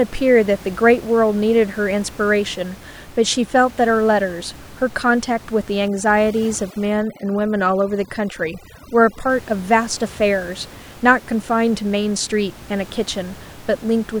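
Overdone noise removal runs from 5.88 to 9.29 s, where an aggressive noise reduction stage strips out individual frequency bands close to its noise estimate. The room noise, about 21 dB below the speech, drops and breaks up into twinkling specks, and quieter parts of the voice vanish.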